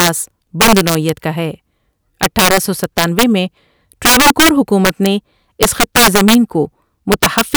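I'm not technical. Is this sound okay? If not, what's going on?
No. This speech has integer overflow: loud moments exceed the largest number the audio can store and wrap to the opposite extreme, giving violent cracks. Affected: 0.00–0.09, 0.61–1.09 (before "کا ہے"), 2.23–3.23, 4.05–4.49, 4.85–5.06, 5.63–6.35 and 7.12–7.56 seconds.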